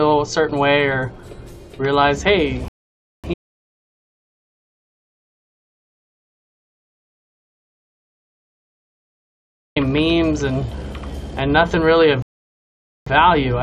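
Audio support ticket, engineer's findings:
Rebuffering stall at 2.68–3.24 s and 12.22–13.07 s. Playback stops dead, then resumes at the same point. Player buffer underrun: 0.56 s and 0.84 s added, nothing lost.

Audio dropout to silence, 3.34–9.76 s. Abrupt cut to digital silence, no room tone, about 6.42 s of sound missing. Likely an input link loss or mute, with silence written meanwhile.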